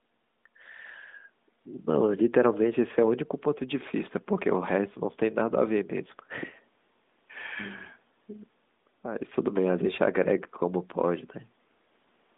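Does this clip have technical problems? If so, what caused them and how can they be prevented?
No, nothing in this speech clip stood out as a technical problem on listening.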